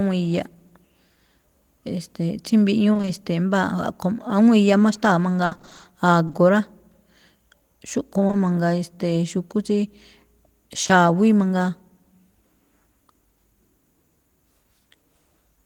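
Speech, with two bursts of repeated packet loss (robotic sound): from 2.93 to 3.09 s, four gaps fill about half the span, and from 5.45 to 5.85 s, nine gaps fill 55%, the longest 60 ms. Each gap is patched by extending the previous sound, so the audio turns choppy, showing on a spectrogram as smeared, repeated harmonic slices alternating with real detail. Short concealed packet loss then strikes three times, each as two back-to-back 20 ms holes: 6.27 to 6.35 s, 8.27 to 8.35 s and 10.83 to 10.91 s. The receiver bridges each 20 ms hole from the last pitch or noise and blends back, heard as a brief smear or wobble and seen in the waveform as a flattened, overly regular patch.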